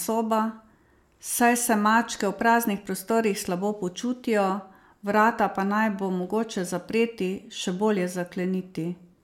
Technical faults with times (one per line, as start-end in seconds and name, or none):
none